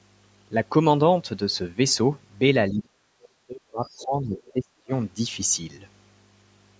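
From 2.7 to 2.93 s the talker's level sinks sharply, by around 30 dB at its deepest, for about a fifth of a second. This is speech suppressed in double talk, likely from the echo canceller turning down its own talker because it could not separate that voice from loudspeaker echo while both sides spoke.

At 3.23 s a brief scrap of the other side's voice leaks through, around 30 dB below the talker. It is likely residual loudspeaker echo that the canceller left in the microphone signal. It is distinct from room reverb because it carries a separate voice with its own timing, not a tail of the talker's own sound.

From 3.46 to 4.93 s the double-talk suppression returns for about one and a half seconds, with dips reaching around 35 dB. The talker's level dips within the band-limited call audio, which has nothing above 8 kHz. Inside that stretch the far voice leaks through twice. At 3.86 to 4.05 s it sits around 30 dB down. 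At 4.36 to 4.52 s it is louder, around 20 dB down. The leaks arrive while the talker is being pushed down, which separates them from ordinary crosstalk on a shared line.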